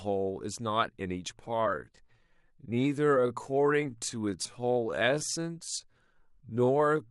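A time-stretched section runs from 1.42 s to the end: the speech slows abruptly to about 0.71 times its pace at unchanged pitch, so it drags, likely from software repeating short pieces.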